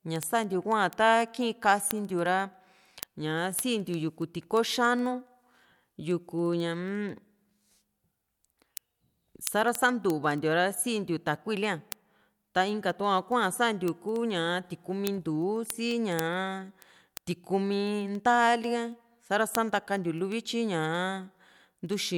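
Speech with word clock ticks from 0.16 to 22.14 s: sharp clicks roughly every 70 ms, seen as evenly spaced thin vertical lines, from an unlocked digital link drifting around 300 ppm.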